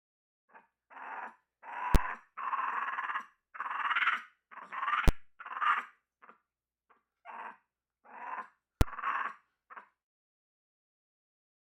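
A processing stage produced invalid numbers at full scale three times. Infinite or undefined results were clamped to the largest positive or negative value, pinning the output to one extreme value, far beyond the audio's peaks, for a whole processing block. Each block is short, so the pinned stretch comes across as a single loud bang rather than two pops around a silence, at 1.95 s, 5.08 s and 8.81 s. The first two last about 10.7 ms, which fits a 512-sample block, and the third about 5.3 ms, which fits a 256-sample block.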